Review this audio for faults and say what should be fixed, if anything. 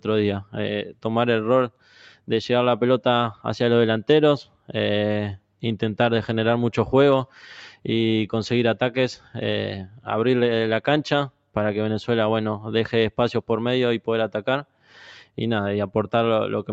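A noise suppressor applied to music or sounds stays active throughout, pumping levels by roughly 5 dB; the waveform envelope breathes while held tones and decay tails thin.

Sound cut by the noise suppressor appears at 1.7–2.29 s, 4.45–4.71 s, 9.17–9.35 s, 9.88–10.07 s and 14.63–14.97 s, with drops of about 10 to 12 dB. These show as dark, hollowed patches on the spectrogram and sudden dips in the waveform.

The 8 kHz ceiling from the call codec is expected. To prevent the suppressor faults, disable speech noise suppression, or switch the call to a music mode, whenever non-speech audio is sent.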